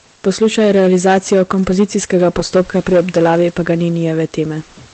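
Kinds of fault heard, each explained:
Hard clipping: the speech is driven about 8 dB past what a stage can pass, so roughly 4% of samples hit the ceiling and flatten. It sounds like harsh fuzz on louder syllables; the waveform shows squared-off peaks, the spectrogram smeared high harmonics above each loud burst.
Comfort noise in place of the background: from 0.15 to 0.23 s, about 80 ms of the real background, which sits about 38 dB under the loud speech, becomes a smooth, featureless hiss about 2 dB quieter, likely Opus discontinuous transmission. The spectrogram shows a uniform noise patch without the background's texture.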